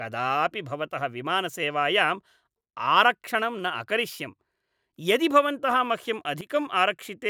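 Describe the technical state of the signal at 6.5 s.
Right around 6.5 s the speech and its background noise drop together by about 12 dB, abruptly rather than fading, from 6.41 s until the level steps back up at 6.50 s, a dip of roughly 90 ms. This is a sudden gain jump. The likely cause is a digital gain setting or bit shift applied from one sample to the next with no ramp, so the whole signal, noise floor included, shifts level in a single step.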